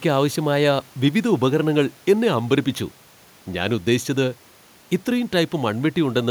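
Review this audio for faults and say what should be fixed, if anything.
No faults turned up in this audio, so nothing needs to be fixed; the faint room noise sits about 33 dB below the speech and belongs to the recording itself.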